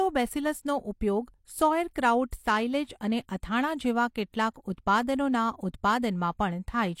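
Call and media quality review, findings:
Pre-echo on speech, twice. Short hiss smearing in ahead of a sharp onset at 1.93–1.96 s (about 28 ms) and again at 4.54–4.56 s (about 20 ms). Probable component: transform codec in the media path. Mechanism: block-wide quantisation noise, sized for the loud attack, leaks into the quiet lead-in before it, so the attack arrives soft. Worth checking the encoder's transient handling or block switching.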